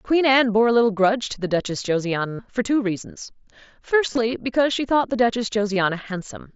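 A buzzy, steady tone holds at full level from 2.27 to 2.39 s and ends with a slight warble, with briefer patches between 4.08 and 4.18 s and from 5.74 to 5.76 s. This is concealed Bluetooth headset packet loss. Packets from the mSBC headset link dropped out: about 120 ms in one run, then about 45 ms scattered across 90 ms, then 22.5 ms. The receiver filled each gap by repeating the closest-matching recent stretch of waveform.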